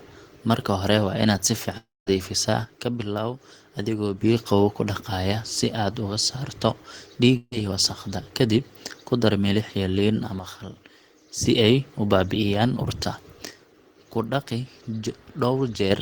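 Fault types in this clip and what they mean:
Long network dropout: Twice the sound breaks off and the receiver papers over the gap, most likely because packets stopped arriving. After "hore waa inaad si", from 1.77 to 2.08 s, about 0.3 s of audio is lost: a fading buzz-like continuation of the last sound stands in for it, ending in about 0.2 s of silence. From 7.36 to 7.53 s, just before "iyo wasakhda", about 0.16 s goes missing the same way, with only about 30 ms of silence.
One channel drops out: Three times the level falls abruptly by about 6 dB and then recovers, which is what a mono sum does when one stereo channel disappears and only the other remains. This first happens from 2.65 to 4.21 s, ending just before "biyo qabow ku dhaqaya", then again from 10.39 to 11.46 s and from 13.51 to 15.91 s. Anything carried only in the lost channel vanishes for those stretches.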